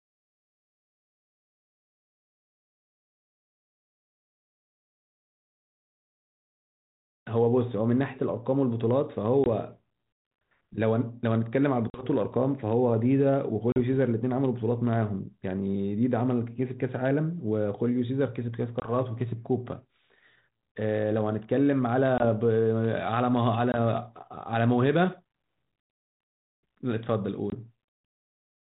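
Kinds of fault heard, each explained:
Packet loss on an ADPCM call: silent 20 to 40 ms holes at 9.44, 11.9, 13.72, 18.8, 22.18, 23.72 and 27.5 s; the decoder's predictor loses step, so speech returns slightly distorted.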